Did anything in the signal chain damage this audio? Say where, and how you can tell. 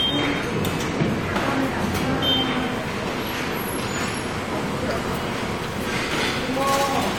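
No, nothing in the signal chain audibly damaged this audio. Listening through, there is no moment where the sound changes in a way that points to a fault at any stage.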